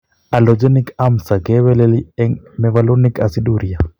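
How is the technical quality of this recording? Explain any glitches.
The speech has hard clipping on its louder stretches: 0.34 to 1.33 s and 2.76 to 3.22 s (overdriven by about 4 dB), plus 1.68 to 1.84 s and a brief peak at 3.80 s (about 1 dB). Peaks exceed what a stage can pass and are sheared flat, giving crackle on the peaks. The waveform shows flat-topped peaks; the spectrogram shows added harmonic energy smeared upward into the high kHz range.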